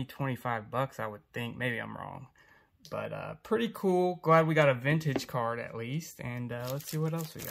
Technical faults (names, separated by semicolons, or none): none